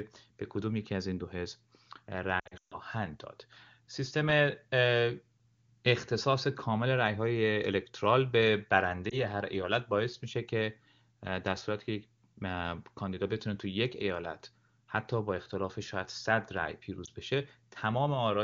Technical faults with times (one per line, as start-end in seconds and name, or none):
2.39-2.78 lost AMR speech frames
9.10-9.19 lost AMR speech frames
17.05-17.10 lost AMR speech frames